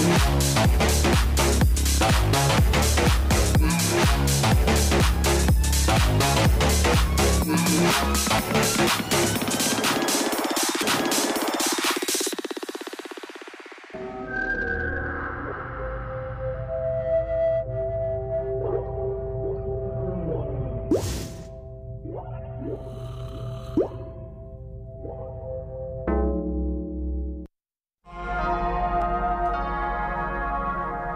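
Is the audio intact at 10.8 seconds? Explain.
No. At 10.82 s there is a CD skip: a knock or disc flaw threw the laser onto another turn of the spiral, so the player muted for just a few milliseconds and resumed from a different point in the program. It is heard as a brief tick followed by an abrupt jump in the sound. On a waveform this shows as a tiny flat gap with a discontinuity on either side; a spectrogram shows a thin vertical broadband line where the material changes abruptly.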